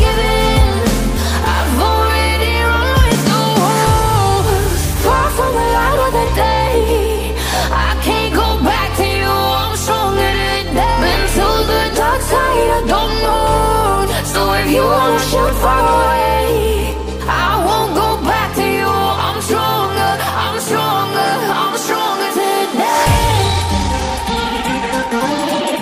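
At 23.26 s the pace jumps and runs to the end at 25.81 s. This is a time-stretched section, sped up 1.6 times while the pitch holds. Software likely squeezed it by dropping short pieces. It sounds rushed.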